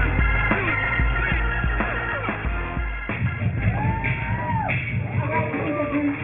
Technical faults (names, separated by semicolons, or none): aliasing